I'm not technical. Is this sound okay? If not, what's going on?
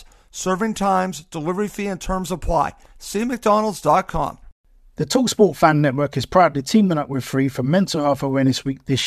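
Yes, this sound is okay, and nothing is going on with it that needs explaining.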